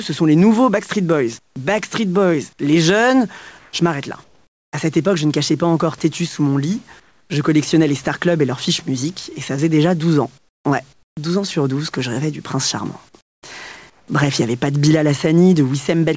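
This speech clip's level pumps, swinging around 10 dB, so loud and soft passages sit squashed together. This is gain pumping, likely from input gain set far too high with a fast limiter clamping each peak. In the pauses at 1.39–1.56, 3.59–3.73 (after "les jeunes"), 4.24–4.73, 7.00–7.30 (after "têtu sous mon lit"), 10.38–10.65, 10.93–11.17, 13.09–13.43 (after "rêvais du prince charmant") and 13.90–14.08 s, the room's textured background gives way to a flat, featureless hiss, up to about 17 dB quieter. This is likely comfort noise in place of the background: the sender stops transmitting when no speech is detected, and the receiver synthesises stand-in noise, in a band that stops at 8 kHz.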